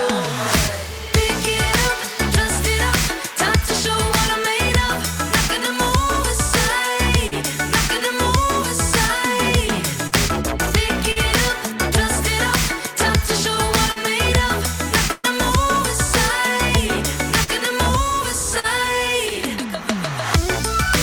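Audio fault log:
7.27–7.34 s, 10.07–10.15 s, 11.12–11.19 s, 13.92–13.99 s, 17.44–17.50 s and 18.59–18.66 s, short concealed packet loss: each time about 40 ms of audio never arrived, and the receiver extended the preceding sound to cover it before blending back. The result is only a brief smear or wobble, unlike the longer held tone of a burst.
15.12–15.27 s, burst of packet loss: about 120 ms went missing in one run. The receiver kept continuing and fading the last sound for the whole stretch, with no silence. The result is a drawn-out buzz or hiss before the audio picks up further along, clearly longer than the 40 ms glitches.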